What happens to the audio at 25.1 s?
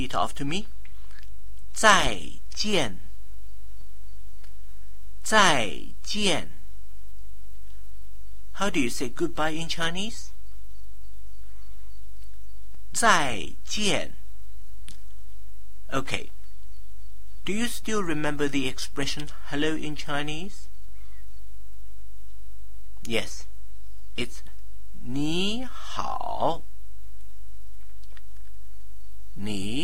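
Nothing goes wrong at 25.1 s; the audio plays through that moment intact, with no dropout, click or distortion.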